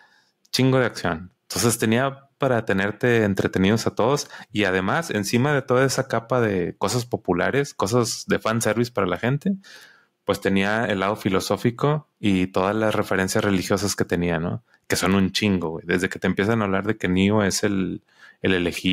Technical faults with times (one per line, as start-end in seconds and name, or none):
none